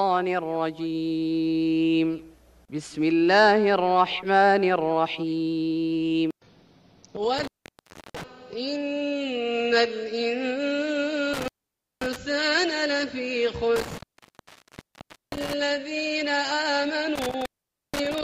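The sound keeps dropping out with crackly edges, a classic intermittent contact, like a loose plug or cable briefly opening: gaps at 7.39 s (0.67 s), 11.33 s (0.53 s), 13.76 s (1.35 s) and 17.15 s (0.48 s), each leaving faint hiss while the line's open.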